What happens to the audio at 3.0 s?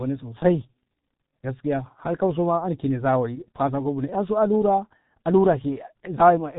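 At 3.0 s the speech carries G.723.1 codec damage, present throughout the clip. Coding in 30 ms frames at a low rate, which fits a 6.3 kbit/s mode, it sounds muffled and hoarse with smeared consonants. A spectrogram shows nothing above 3.8 kHz and blocky, frame-stepped harmonics.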